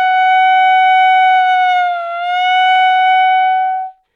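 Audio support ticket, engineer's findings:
Dropped samples at 2.76 s: single sharp click, thin vertical line in spectrum. Waveform jumps ahead by roughly one sample; likely a stream discontinuity in buffering or transport.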